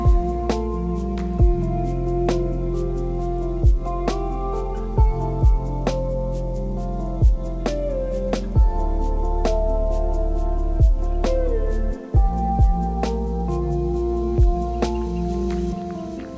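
There are no technical faults to describe in time order; the audio comes through a G.722 call path, so nothing is heard above 8 kHz.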